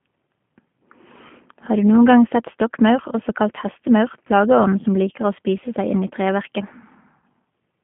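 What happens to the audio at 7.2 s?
Around 7.20 to 7.23 s the connection drops about 20 ms of audio, consistent with a single lost packet, and the decoder fills the gap by extending its last pitch and vocal tract settings at falling gain. This VoIP packet loss concealed by the speech codec is heard as a short smeared stretch, buzzy or noise-like, that dips in level before the sound recovers.

That moment, like the whole clip, passes through the G.729 codec at 8 kbit/s, which rebuilds speech from a filter, a pitch predictor and a few pulses per frame and confines it to about 150 Hz to 3.4 kHz. The speech sounds band-limited, with a plainly rough, synthetic edge.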